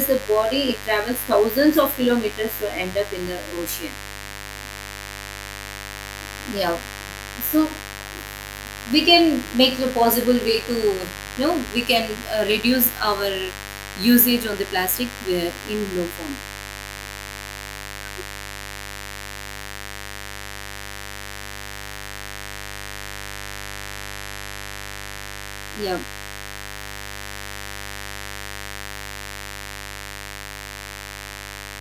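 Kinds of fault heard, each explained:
Mains buzz: switching spikes from the 50 Hz supply leak into the signal, giving a steady, raspy, harmonic-rich buzz roughly 15 dB below the speech throughout.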